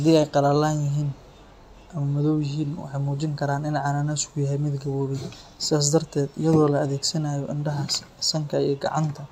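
No technical faults can be heard anywhere in the speech recording, with the signal holding steady and intact throughout.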